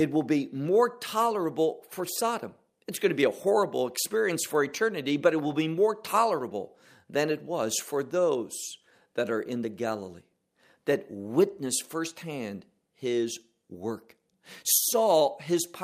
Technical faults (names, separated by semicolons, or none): none